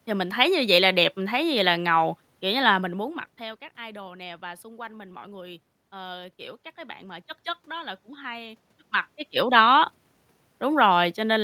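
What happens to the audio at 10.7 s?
At 10.7 s the audio is intact, with no dropout, distortion or other technical fault at that point.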